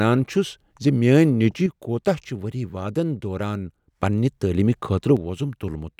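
A stereo channel likely drops out from 1.66 to 4.01 s and again from 5.17 s to the end, so the summed speech falls abruptly by about 6 dB.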